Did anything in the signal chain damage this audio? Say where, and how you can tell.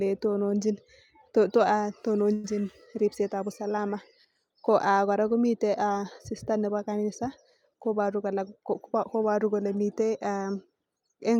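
Yes. At 2.33 to 2.46 s the speech stops on a short fading buzz or hiss for about 0.10 s, then resumes cleanly with "riebetab usalama", nothing skipped. This is a call audio freeze, likely from delayed network packets draining the jitter buffer, which filled the wait by extending the last sound.

From 8.00 to 9.61 s the speech sounds hurried, running at 106% speed with unchanged pitch. That is a jitter buffer speed-up. Holding more audio than it aims for, the receiver trimmed about a tenth of a second, in many pitch-period slices, to shrink its excess delay.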